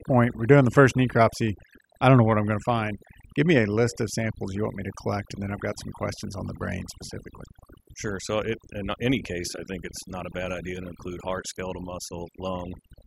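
Speech affected throughout by overdone noise removal: an over-aggressive noise reducer pulls bands near its noise estimate down, leaving a lowered background that breaks up into twinkling specks.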